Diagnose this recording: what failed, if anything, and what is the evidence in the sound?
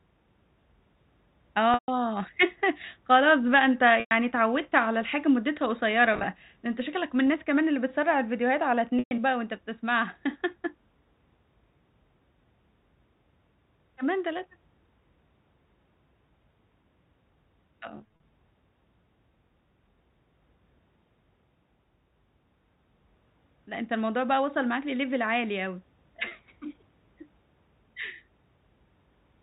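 Network stage: packet loss with pitch repetition at 1.74, 4.0, 6.14, 8.99, 17.96 and 26.28 s, gaps of 30 to 140 ms. The receiver loops the last pitch period, giving a held, buzzy tone that fades. A spectrogram shows frozen harmonics; the waveform shows identical repeated cycles decaying.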